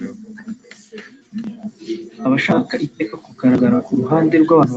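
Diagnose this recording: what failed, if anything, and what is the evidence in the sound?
Between 1.32 and 2.76 s the speech and the background noise floor swell together by about 4 dB, a slow rise rather than a step. This is automatic gain rising in the call processing stage: the gain control judged the input too quiet and ramped its gain up over roughly 1.4 s. The band limit at 8 kHz is the call codec's normal bandwidth.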